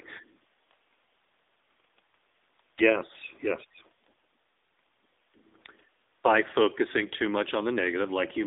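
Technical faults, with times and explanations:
throughout, AMR narrowband mobile codec: thin, buzzy, synthetic speech held within 250 Hz to 3.7 kHz; low-rate vocal-tract modelling, fitting roughly 8 kbps, discards fine detail.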